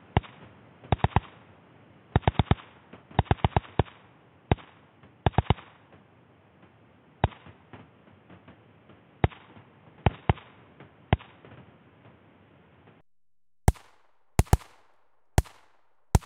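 An everyday-sound recording whose first 13.01 s arrive band-limited, with nothing above 3.8 kHz, so the material sounds dull and boxy and carries its own faint background noise about 30 dB down. At 13.01 s the full bandwidth returns abruptly, with no gap and no real jump in loudness. That fits an input switched to a poorer device, likely a fallback microphone or headset call profile. A fixed low-pass filter would not change its noise floor or clear up mid-clip.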